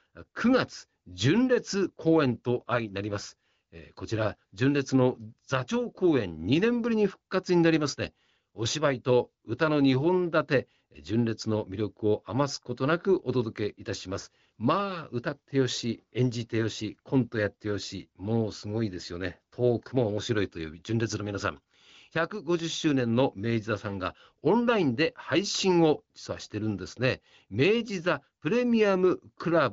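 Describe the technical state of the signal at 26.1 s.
At 26.1 s the speech is intact, carried cleanly by the AMR wideband (HD Voice) codec at 18.25 kbit/s with its band ending around 7.4 kHz.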